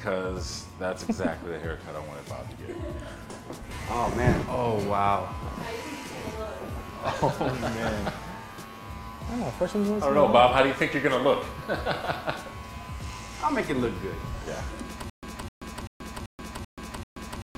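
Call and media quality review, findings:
Stutter with silent gaps from 15.10 s to the end. Same 256 ms burst comes back six times, with about 132 ms of dead digital silence between, on a steady 387 ms cycle. Likely a stalled player or stream replaying its last fragment each retry. The real audio there is gone.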